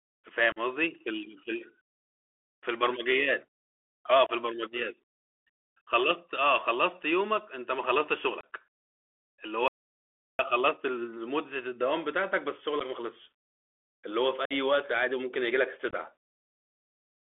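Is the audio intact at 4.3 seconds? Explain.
No. From 4.26 to 4.31 s the speech drops out for about 26 ms, a short hole with hard edges that can click, and the speech returns briefly quieter. This is unconcealed Bluetooth headset packet loss. Several of the few-millisecond voice packets between headset and phone never arrived, and nothing rebuilt them. Silence or an idle pattern filled the gap. On this CVSD link, the decoder's adaptive step must then climb back up, which causes the momentary level dip.

Under and around that gap the whole passage sounds narrow and telephone-like, confined to about 300 Hz to 3.5 kHz. It has a granular hiss, s sounds turn scratchy, and loud bright moments distort. This is the Bluetooth CVSD headset codec, and its damage is plainly audible here. At 64 kbps it encodes each sample as a single up-or-down bit with an adapting step size. Fast high-frequency energy outruns that step, and the coarse bit steps leave the gritty noise floor.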